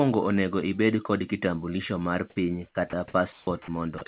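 From 2.72 to 2.75 s the speech comes in abruptly, missing its first 30 ms. That's an onset clipped by the voice detector, likely because it was slow to notice sound restarting, so those opening moments never got sent and a soft start becomes a hard edge.

At 2.90 to 2.93 s, 30 ms of speech is dropped by the voice detector and replaced with flat noise, likely because it took that stretch for background and stopped sending until it triggered again.

Another clipped onset follows at 3.12 to 3.14 s, this time 20 ms shaved off the front.

Between 3.32 and 3.47 s you get comfort noise in place of the background, likely the receiver filling a transmission pause with synthetic noise. For those 150 ms the real background, already about 32 dB below the loud parts, turns into a smooth, featureless hiss about 5 dB quieter. It ends in another clipped onset at 3.45 to 3.47 s, missing 20 ms.

More sound is dropped at 3.62 to 3.68 s (60 ms) and at 3.98 to 4.01 s (30 ms), with steady noise briefly standing in each time.

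Throughout, nothing reaches above 4 kHz, which fits a narrowband G.711 call path.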